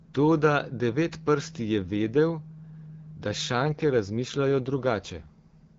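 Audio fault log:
3.66 to 4.88 s, AMR rate drop: the wideband speech coder steps down from a rate that sounds like 12.65 kbit/s to one near 8.85 kbit/s, spending fewer bits on the voice itself, so the speech turns rougher and more synthetic without losing bandwidth or breaking up, then clears again.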